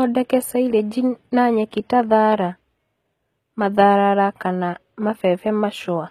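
HE-AAC compression throughout: the treble is plainly rebuilt from lower bands, nothing above 14.9 kHz, so s sounds turn gritty and lispy, likely from a low bitrate near 20 kbps.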